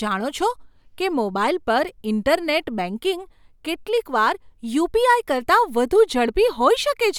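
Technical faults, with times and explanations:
Nothing stood out on listening to this speech recording.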